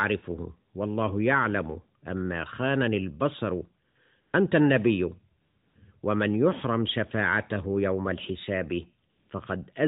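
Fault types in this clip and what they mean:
AMR comfort noise: The phone stopped sending speech during pauses. Smooth synthetic noise replaces the real background in four gaps, 60 to 340 ms long.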